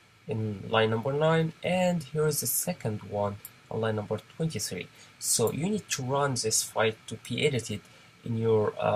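Nothing stood out on listening; no technical fault could be heard anywhere in the recording.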